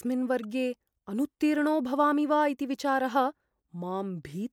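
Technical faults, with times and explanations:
0.43 s, corrupt frame decoded: flipped bits in a single compressed frame were passed to the decoder, which played it anyway, so misread gains and codes put energy at the wrong frequencies, heard as a brief glitch peaking around -30 dBFS for the length of that frame.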